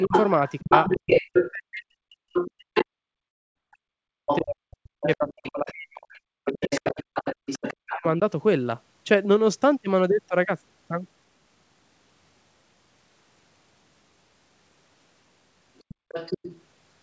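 From the start to about 7.99 s, the other side's voice leaks through. A second voice sits only a little below the main speech, likely echo from the loudspeaker that the echo canceller failed to remove from the microphone signal. Because it is nearly as loud as the main speech, it competes with it directly.

Over nearly the same span, from 0.07 s to 8.05 s, the main speech is suppressed during double talk. With both sides talking at once, the canceller likely could not separate the near talker from the echo and pulled the whole signal down. The main voice dips and breaks into pieces for around four seconds in total. At its deepest the drop reaches about 40 dB, so parts of the speech all but vanish.

Inside that stretch, from 3.28 s to 3.57 s, a long network dropout occurs. About 280 ms of audio never arrived, likely lost in transit. The receiver covers the gap by extending the last sound as a fading buzz for roughly 270 ms, followed by near-silence. 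The audio then resumes further on, with the missing portion simply gone.

Near the end, from 15.78 s to 16.61 s, the other side's voice leaks through again. This time it sits well below the speech, as a faint second voice, likely residual echo.

Within that leak, from 15.95 s to 16.08 s, the background is gated by the echo canceller. The room sound drops by up to 32 dB for about 150 ms while the canceller clamps down on the microphone. It then returns when the canceller lets go, leaving a brief hole in the ambience.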